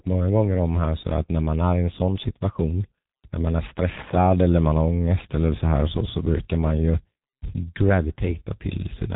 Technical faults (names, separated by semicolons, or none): G.723.1 codec